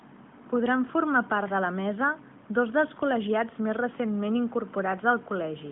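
Nothing goes wrong in this speech clip; it just carries the narrow phone-line band of an AMR narrowband mobile codec, with nothing above about 3.8 kHz, which fits a 12.2 kbps mobile call.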